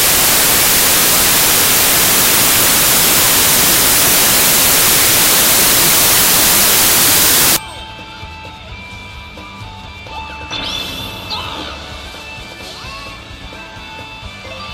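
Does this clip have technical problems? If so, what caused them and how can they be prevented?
Yes. From 0.0 to 7.56 s the audio is replaced by loud, harsh broadband noise, the sound of samples built from the wrong bytes: the reader assembled each sample off by a byte or in the wrong order, so the rapidly changing low bits ended up as the large part of every value. On a waveform this looks like a dense block. A spectrogram shows energy spread across all frequencies. To prevent it, declare and check byte order, sample width and alignment explicitly when reading raw data.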